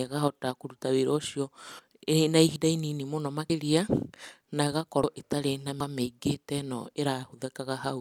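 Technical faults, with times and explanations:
2.56 s, 5.04 s and 5.80 s: dropped buffer (overrun). At each point the speech jumps forward with no gap, losing roughly a tenth of a second at 2.56 s, about 150 ms at 5.04 s and nearly a third of a second at 5.80 s. The likely cause is the recording software failing to collect incoming samples before the hardware overwrote them. The missing stretch is discarded and the two sides are spliced together, so the speech lurches ahead, with the last loss the longest.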